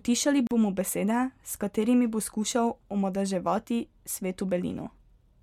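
At 0.47 s the speech just drops out for about 40 ms, then picks up again right before "bomo besede". That's a gap at a join of encoded pieces: separately encoded chunks butted together with the encoder's lead-in silence and end padding left in, so you get a hole with smeared edges.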